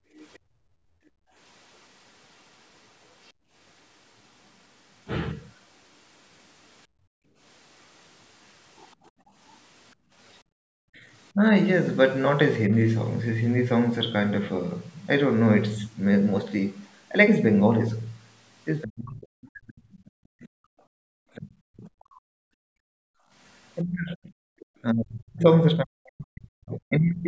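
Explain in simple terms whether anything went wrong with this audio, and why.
The call's echo canceller turned the microphone down hard while the loudspeaker was playing, which is background gated by the echo canceller. The room sound dips or briefly vanishes within 0.0 to 3.51 s, 6.87 to 10.61 s and 20.74 to 23.31 s, then returns.

The echo canceller likely failed to remove everything the loudspeaker played, so the other side's voice leaking through can be heard. A faint second voice runs from 0.18 to 5.46 s, with very short scraps at 10.32 to 10.38 s and 24.59 to 24.66 s.

When both sides spoke at once, the canceller likely couldn't tell the talker from the loudspeaker echo and turned both down. This is speech suppressed in double talk: the voice cuts out briefly from 10.89 to 11.39 s and drops away in pieces from 18.83 s to the end.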